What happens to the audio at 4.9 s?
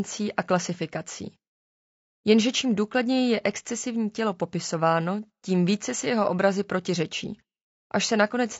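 At 4.9 s the speech sounds rough and grainy, with noise between harmonics, as it does throughout; likely low-delay AAC compression, whose short frames at a low bitrate, around 32 kbps, blur pitch detail.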